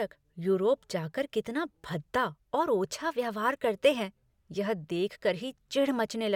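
No technical faults are audible.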